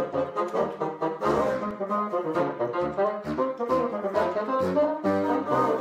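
From 1.06 to 1.87 s there's a run of six CD scratch ticks, each a tiny dropout of a few milliseconds. A scratch wipes out more data than error correction can rebuild once per disc turn, so the player interpolates or mutes the bad samples.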